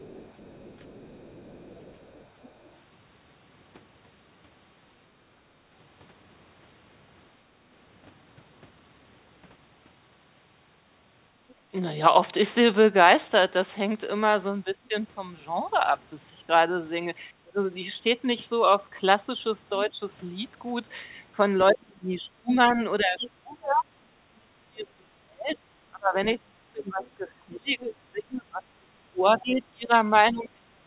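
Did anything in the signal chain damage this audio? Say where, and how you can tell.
Yes. The damage is in the call processing, specifically the echo canceller. Other side's voice leaking through is heard from 0 to 2.72 s, 11.49 to 11.54 s, 22.53 to 23.3 s and 27.06 to 29.41 s. It sits roughly 20 to 35 dB under the talker. The likely cause is loudspeaker playback the canceller failed to subtract.

Background gated by the echo canceller occurs between 5.57 and 7.6 s. The room sound drops by about 10 dB in brief dips, totalling around a fifth of a second. The canceller clamped the microphone while the loudspeaker played, then released it.

Speech suppressed in double talk appears at 11.56 to 11.61 s, a dip of roughly 20 dB. It returns from 14.65 s to the end, dipping as deep as about 30 dB. Both sides likely overlapped, so the canceller attenuated the talker along with the echo.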